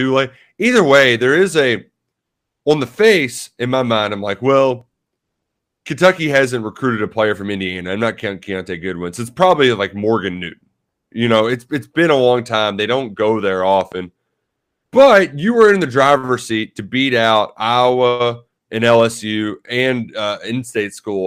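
Overlap between stream segments at 4.81 s, just after "my mind I'm like": two 6-second segments' time stamps collide, and a sliver of real speech is trimmed, heard as a tiny skip. Loud pop from 13.81 to 13.94 s, after "don't go there": two sharp pops a few decibels above the speech, likely a voltage spike from a plug, switch or static, while the speech continues underneath. The same segment overlap recurs at 16.79 s, between "in the driver's seat" and "beat out", as another brief skip.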